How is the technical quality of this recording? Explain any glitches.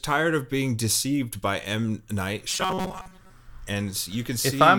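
From 2.50 to 3.32 s the speech turns into a rigid, metallic buzz at 188 Hz that only roughly follows the original, the robotic sound from repeated short buffers. The likely cause is audio arriving too seldom, so a chunk of about 5.3 ms keeps being replayed while most of the real signal, roughly two thirds or more, is skipped.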